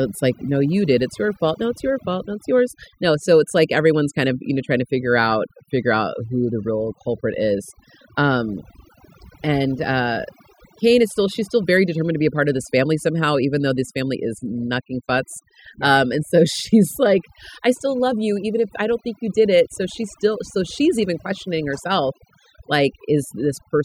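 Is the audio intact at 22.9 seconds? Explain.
No. At 22.9 seconds, as everywhere in this speech clip, the background has dropped away and broken up into twinkling, warbling specks. That is overdone noise removal: an over-strong noise reducer shuts down individual frequency bands near its noise estimate, taking quiet parts of the voice with them.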